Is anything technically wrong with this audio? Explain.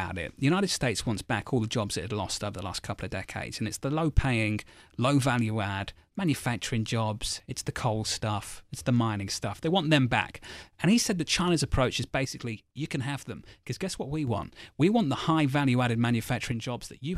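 Yes. The speech suddenly sinks in level twice, from 12.25 to 14.27 s and again from 16.52 s to the end at 17.17 s. The likely cause is one channel drops out: one side of the stereo feed goes missing, so when the two sides are folded into mono, everything they shared comes through at half strength. The voice drops by about 6 dB with a hard edge at each boundary, then jumps back up after the first gap.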